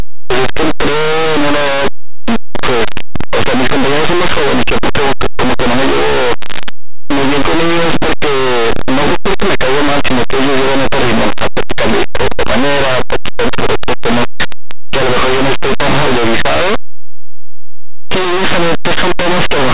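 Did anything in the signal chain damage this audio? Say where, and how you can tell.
Yes, and it's at the sample-format conversion stage: linear audio read as companded. The file holds plain linear 8-bit samples, but something expanded them as mu-law codes. From start to finish the speech is buried in harsh, very loud distortion. Samples sitting just to one side of zero get mapped to the biggest mu-law outputs, while their neighbours on the other side stay tiny, so every quiet stretch blows up into loud, ragged grit.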